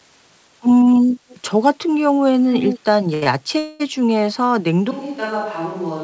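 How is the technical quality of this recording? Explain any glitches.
The recording has several call-related glitches, and the audio throughout stops at 8 kHz, consistent with a wideband call codec such as G.722.

From 1.29 to 1.38 s a very faint delayed copy of the speech appears, and from 2.53 to 2.79 s it returns almost as loud as the speech itself. Both copies trail by about 204 ms. This is likely an echo leak, where a loudspeaker at the far end fed back into its microphone and the echo canceller missed part of it.

At 3.14 to 3.24 s, and again at 3.24 to 3.28 s, a sound is held unnaturally long, for 79 ms and then 21 ms. These are short stalls from a late packet: the jitter buffer ran dry, so the receiver stretched the last sound and then resumed without losing anything.

From 3.58 to 3.82 s the audio hangs as a fading buzz for about 218 ms, then picks up where it stopped. This is likely a call audio freeze, caused by delayed packets that emptied the buffer and inserted a gap.

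At 4.91 s the sound abruptly turns distant and hollow, drops roughly 10 dB, and gains room noise about 25 dB below the speech, staying that way to the end. The likely cause is a switch to a distant microphone.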